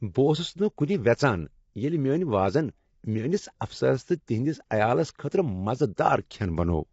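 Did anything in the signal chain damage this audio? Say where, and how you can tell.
Yes. Throughout, the speech sounds rough and grainy with nothing above 7.7 kHz, a codec-stage fault, likely low-delay AAC compression whose low bitrate leaves noise between the harmonics at roughly 24 kbps.

At 0.77 s a brief hiss of about 11 ms precedes an attack, which sounds smeared. This is codec pre-echo: quantisation noise spread across the block ahead of the transient.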